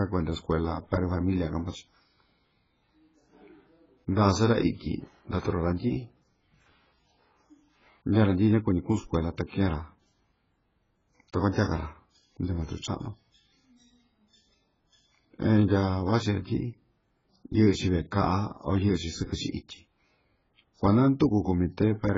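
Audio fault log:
throughout — AAC compression: The speech has been coded very hard, likely by AAC-LC at a bitrate that points to around 12 kbps. Nothing survives above 7.5 kHz, so the sound is dull and smeared, with warbling and a fizzy texture on sibilants.
11.52–11.56 s — pre-echo: A sharp attack fell late in a transform block, so quantisation noise sized for the loud onset was spread over the quiet moment before it. A 37 ms wash of hiss leads into the attack, which sounds softened and smeared.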